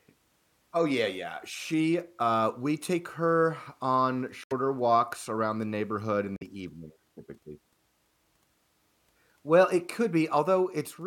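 At 4.44 to 4.53 s, after "we take her on", the speech cuts abruptly to silence. It happens again at 6.36 to 6.43 s, after "around the neighborhood in". Each time the speech resumes further along, with audio skipped. This is a Bluetooth dropout, likely from packets arriving too late.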